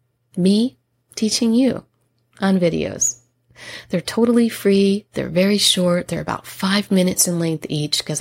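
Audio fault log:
Listening to the speech recording, nothing stood out as a fault anywhere in it.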